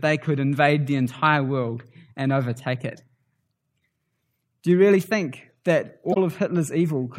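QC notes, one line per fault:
1.26 s: corrupt frame decoded. Damaged data in one compressed frame was played back anyway. Misread gains or codes put energy at the wrong frequencies for about one frame's length. The error peaks at about -25 dBFS.
6.12–6.17 s: corrupt frame decoded. The same fault hits about two consecutive frames, so the wrong content lasts around 50 ms. Here the error peaks at about -5 dBFS, well above the first event.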